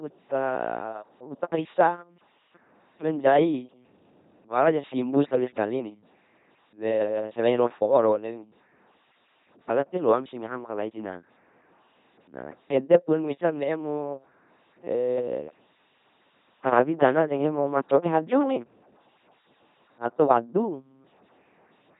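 From start to finish the speech is carried through an LPC-10 vocoder, and the damage is heavy. No natural voice source survives. Each moment is rebuilt from a filter of up to ten poles driven by either a pulse train or noise, which gives a buzzing, mechanical robot voice, with stray buzz or hiss where voiced and unvoiced are misjudged. Nothing remains above 3.8 kHz, which fits a 2.4 kbit/s stream. That all-or-nothing switching, not mere muffling or warble, marks it apart from ordinary low-bitrate codecs.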